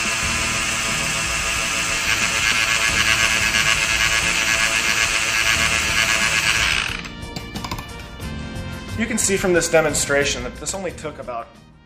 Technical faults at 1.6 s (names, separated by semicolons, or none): none